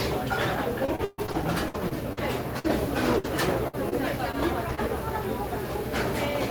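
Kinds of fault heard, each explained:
Repeated packet loss (robotic sound): From 0.85 to 4.79 s, pieces of the audio keep dropping out. Each hole is patched by extending the sound just before it. Over a dozen gaps follow closely, the longest 135 ms, leaving a choppy texture.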